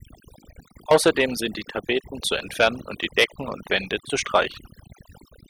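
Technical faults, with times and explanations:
Throughout, overdone noise removal: the background drops and breaks up into twinkling, chirpy specks. A noise reducer set too strong pulls individual frequency bands down or out whenever they sit close to its noise estimate, taking quiet speech detail with them. A noise gate would instead mute everything at once between phrases, and a low-bitrate codec would leave a dull, smeared top end rather than isolated sparkling specks in the silences.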